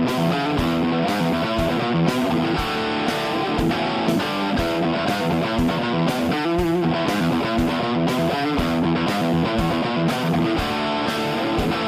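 Nothing goes wrong anywhere in this one, so there's no fault to point to at any moment.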